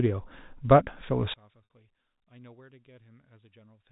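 From 1.34 s to the end, one stereo channel likely has its polarity reversed, so the centred speech cancels when the channels are summed to mono. The level drops by about 34 dB, leaving only a faint residue of the voice.

At 1.65 s, packets were lost and the receiver bridged the 60 ms gap by repeating the last pitch period, which fits three 20 ms packets. The repeated cycle fades out, heard as a brief fade into silence in the already weakened speech before the narrow G.711 telephone sound resumes.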